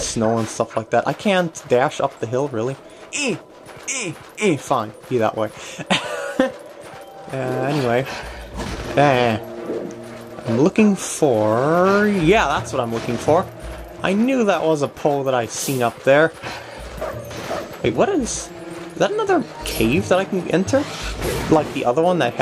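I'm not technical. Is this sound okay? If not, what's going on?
Yes, the sound is fine: nothing in the recording stands out as a technical problem.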